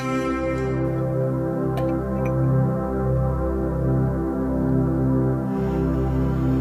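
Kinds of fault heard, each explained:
Low bit depth without dither: From about 0.85 s to the end, a grainy, gritty distortion rides on the sound and changes with it, sitting roughly 40 dB below the signal. This is likely quantisation without dither, consistent with 8-bit rounding. On a waveform, zooming in shows visible staircase steps. A spectrogram shows signal-correlated hash across the band rather than a steady, even noise floor.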